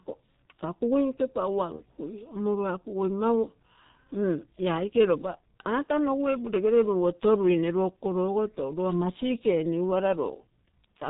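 G.723.1 codec damage runs through the whole of this speech clip. The heavy coding at about 6.3 kbit/s leaves nothing above 4 kHz and tracks the vocal tract only every 30 ms, so the speech sounds muffled and hoarse with smeared consonants. VoIP packet loss concealed by the speech codec shows up at 1.76–1.82 s and again at 5.84–5.89 s, just before "nogu e". Each gap fits a single lost 30 ms frame that the decoder filled by repeating its last pitch and filter at falling gain, producing a brief, fading smear of buzzy tone or coloured noise that stays weak for a moment after the packets resume.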